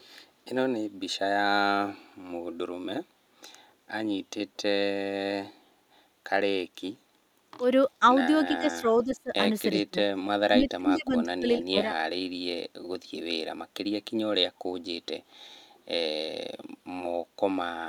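A speech recording with two kinds of fault. At the very start, 0.00 to 0.05 s, there is a brief echo leak: a faint copy of the speech, very low at around 40 dB below it, arrives 387 ms late. That long fixed delay separates it from room reverberation, which smears continuously rather than repeating. The likely cause is a far-end loudspeaker whose echo canceller let a trace of its microphone pickup return. Later the talker is pushed down in three stretches, 8.51 to 9.33 s, 9.76 to 9.99 s and 10.43 to 11.89 s, dipping by roughly 20 to 30 dB for about half a second, a brief moment, and about a second respectively. This is speech suppressed in double talk, likely an echo canceller mistaking the talker for echo while the other side spoke. Unlike packet-loss dropouts, the level dips by roughly 20 to 30 dB instead of vanishing completely.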